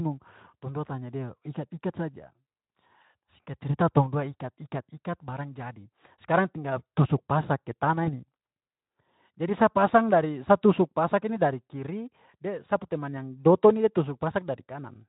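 At 8.06 to 8.09 s the speech shows VoIP packet loss concealed by the speech codec. About 20 ms of audio went missing, which points to a single lost frame, and the Speex decoder filled the gap by repeating its last pitch and filter settings at reduced gain. The result is a short stretched patch with a dip in level, and the voice takes a few tens of milliseconds to regain its normal clarity after the gap.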